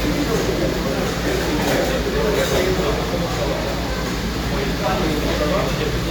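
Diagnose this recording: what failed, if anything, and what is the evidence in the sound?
Nothing failed; no faults detected.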